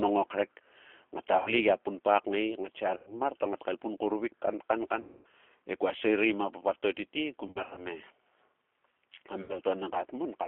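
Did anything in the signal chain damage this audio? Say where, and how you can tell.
Yes. The whole clip sounds narrow and slightly rough and synthetic, confined to roughly 300 Hz to 3.4 kHz with plainly audible coding grain. That points to the codec stage: the G.729 codec at 8 kbit/s, rebuilding speech from a vocal-tract filter, pitch predictor and sparse pulses.

The network stage adds VoIP packet loss concealed by the speech codec at 1.38–1.55 s, 2.97–3.21 s (after "punpa kngae ngatsia"), 5.01–5.26 s (after "kauruvik kan kan ka"), in scattered short gaps over 7.47–7.87 s, and at 9.42–9.59 s. At each of these points the sound smears into a fading buzzy or noisy tone and stays weak after it. This happens because the decoder extrapolates from its last frames with falling gain.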